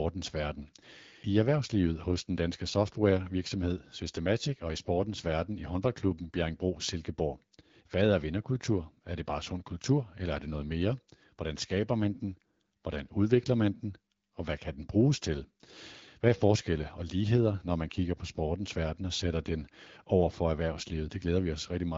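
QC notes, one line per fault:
Nothing stood out on listening to this speech clip.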